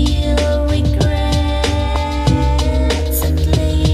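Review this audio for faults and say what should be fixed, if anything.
Nothing to fix: no audible faults anywhere in the clip.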